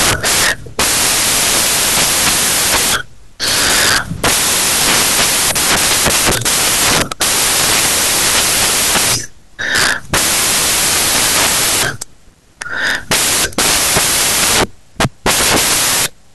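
A speech recording turned, for its whole length, into loud broadband hiss: the samples are built from the wrong bytes. The reader assembles each sample incorrectly, through a one-byte offset, reversed byte order or a mismatched alignment, so the rapidly varying low-order bits end up as the most significant part of every value. The result is loud noise, close to white wherever the speech is loud.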